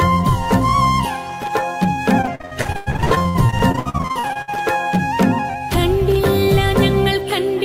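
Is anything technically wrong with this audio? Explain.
Yes. Repeated packet loss (robotic sound) runs from 2.21 to 4.51 s. Dozens of dropouts, up to 99 ms long, are patched by stretching the preceding sound, leaving nearly half that span choppy and robotic.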